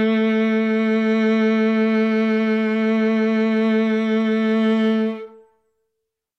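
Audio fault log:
No technical faults are audible in this music clip; the signal holds steady level and continuity throughout, with nothing breaking into it.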